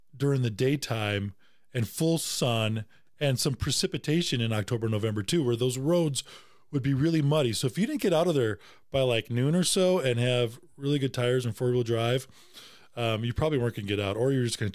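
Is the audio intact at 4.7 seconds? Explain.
Yes, the speech at 4.7 seconds runs cleanly, with no dropout, click, distortion or other break in the signal at that moment.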